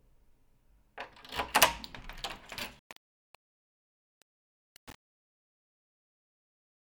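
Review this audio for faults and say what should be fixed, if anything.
The fade stage keeps too few bits and adds no dither. The coarse stepping fits 7-bit resolution. From 2.79 s to the end at 6.98 s, the fade-out that begins near 2.8 s breaks into square steps. This truncation distortion on the fade makes the quiet tail gritty. Fix it by processing the fade at full bit depth and applying dither before any word-length reduction.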